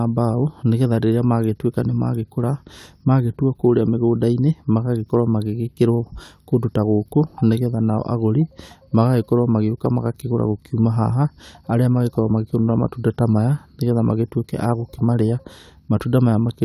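Nothing in this speech recording stands out as a technical fault, so there's no moment anywhere in it worth pointing to.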